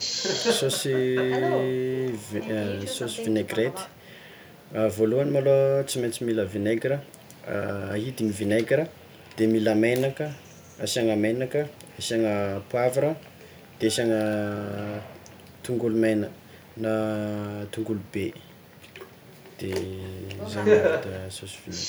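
Nothing in this speech recording stands out as a technical fault, so there's really nothing to point to along the way.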